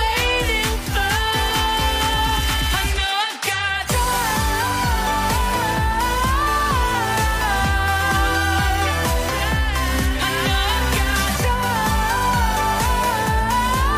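A short stretch of audio with one compressed frames skipped fault at 1.50 s. A single 23.2 ms frame of the encoded stream never reaches the output, so the sound jumps forward by roughly 20 ms. On a waveform the envelope shows a small discontinuity there. A spectrogram shows a brief vertical mark at the join with a slight misalignment of the material on either side.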